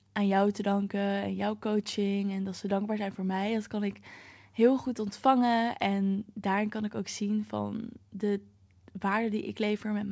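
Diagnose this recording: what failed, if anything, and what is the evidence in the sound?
Nothing failed at any stage: the speech comes through the call path intact, and the absence of content above 8 kHz is the normal band limit of a wideband codec, which fits G.722 at 64 kbps.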